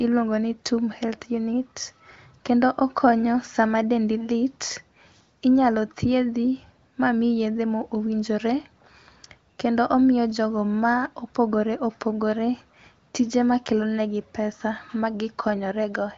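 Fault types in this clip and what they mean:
The speech carries the band-limited character of wideband HD Voice, with nothing above about 7.3 kHz and at most faint coding roughness, which fits one of the higher AMR-WB rates, around 23 kbit/s.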